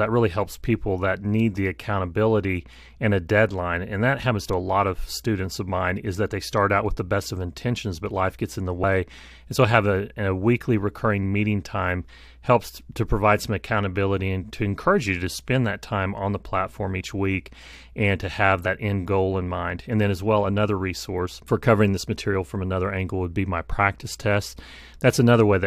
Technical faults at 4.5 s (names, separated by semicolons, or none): compressed frames skipped